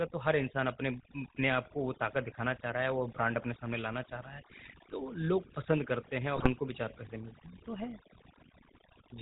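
Throughout, a noise reduction stage was pushed far too hard. Each frequency band that dropped near its noise estimate was pulled down or switched off, taking the quieter parts of the speech with it. This overdone noise removal leaves a near-silent background dotted with twinkling specks.

Also throughout, the speech passed through the GSM full-rate codec, which models the vocal tract and excites it with sparse, evenly spaced pulses while discarding everything above 4 kHz. The damage is plainly audible as a buzzy, gravelly roughness over a band-limited voice, consistent with a 13 kbps channel.

From 6.36 to 6.48 s, GSM bit errors strike. Corrupted bits reached the decoder and scrambled its filter, pitch and gain values across a handful of frames, pointing to a badly degraded link. For that stretch the voice breaks into squawks, pops and gargling.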